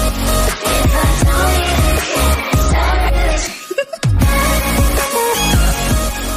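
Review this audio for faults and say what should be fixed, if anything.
No faults found; nothing needs fixing.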